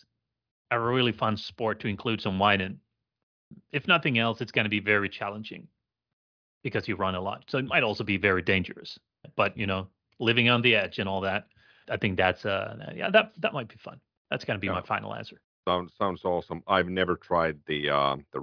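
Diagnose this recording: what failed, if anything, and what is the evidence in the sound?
Nothing failed; no fault can be heard in this recording.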